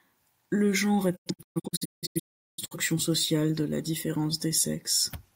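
From 1.15 s to 2.77 s the speech breaks up into a series of silent holes, each cut closed with a quick fade of about 20 ms, and the longest single gap lasts 0.38 s. Across that stretch of roughly 1.5 s, about 1.07 s of audio is simply missing. This is a digital broadcast dropout: the receiver stopped getting clean frames, muted until valid ones arrived again, and the programme carried on with the missing audio lost.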